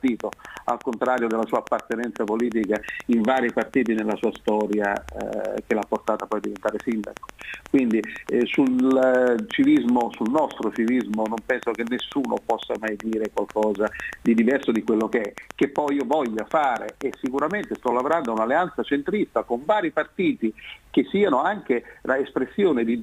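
Likely interference from nearby equipment or a faulty connection or power supply injects a pulse 8.1 times a second from 0.08 s to 18.38 s. This train of clicks, around 150 like-shaped pulses at even spacing and about 10 dB above the sound, ticks steadily over everything, pauses included.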